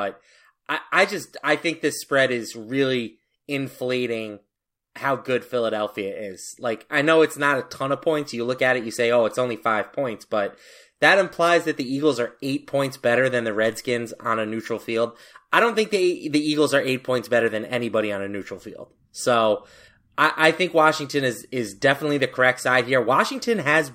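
A speech recording with one sharp, broadband tick at 16.38 s, reaching about -20 dBFS and unrelated to the surrounding sound. This is a bit error spike: a single flipped bit, in memory or on a digital link, made the value jump by a power of two and snap back, which fits a flip spanning two samples.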